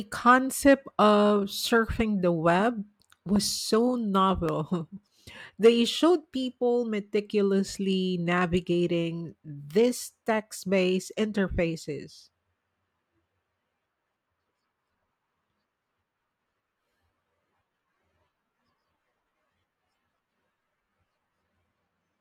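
Right after "of surfing the web", a loud pop hits at 3.36 to 3.38 s, and another at 4.49 to 4.51 s, each about 10 dB above the speech, likely from a voltage spike.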